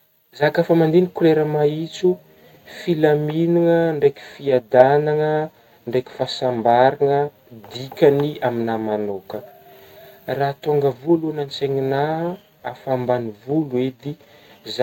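No technical faults can be heard anywhere in this speech recording. There is nothing to mark at any point along its timeline.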